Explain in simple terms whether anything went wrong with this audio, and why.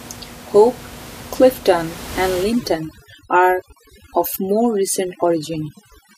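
From 2.43 s to the end at 6.17 s, the recording suffers from overdone noise removal. A noise-cleaning tool was set too strong, so whenever parts of the sound came close to its idea of background noise, it switched them off. The room noise, audible before 2.43 s, drops and breaks up into twinkling specks. Unlike simple muffling, the sound flickers rather than just losing its brightness.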